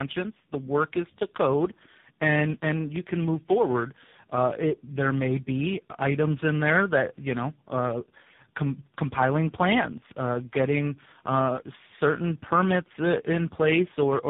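Speech running through three speech codecs in tandem, the last sounding like AMR-NB at 6.7 kbit/s. Each re-encoding compounds the roughness and warble, with nothing above 3.7 kHz.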